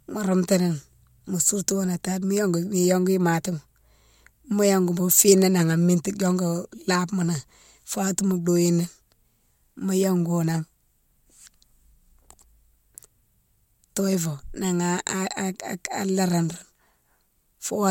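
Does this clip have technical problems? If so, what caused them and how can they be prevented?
No, nothing in this speech recording stood out as a technical problem on listening, so there is nothing here that needs preventing.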